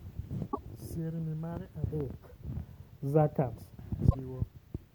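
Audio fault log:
0.51–0.58 s and 4.09–4.16 s, broken MP3 bit reservoir: speech skips ahead through a 70 ms glitch, likely dropped frames leaving the next frames reading the wrong reservoir bytes.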